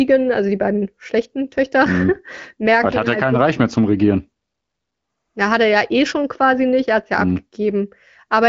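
No faults can be heard in this speech, which carries the narrow top end of AMR wideband (HD Voice) coding, with nothing above about 7.6 kHz and only light coding damage, consistent with one of its higher rates near 15.85 kbit/s.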